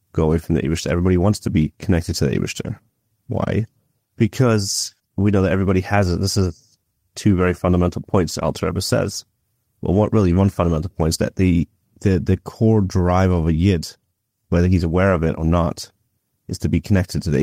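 No technical faults are audible.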